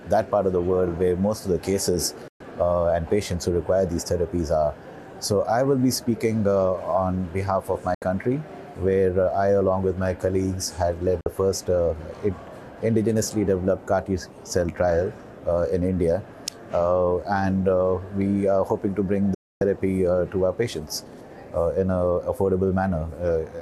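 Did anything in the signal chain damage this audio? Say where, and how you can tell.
Yes, a digital broadcast dropout at the reception stage: the sound mutes, with about 3 ms fades, at 2.28, 7.94, 11.21 and 19.34 s, for 120, 72, 48 and 264 ms. Those lengths are all multiples of 24 ms, which fits the receiver muting whole failed frames until good ones returned.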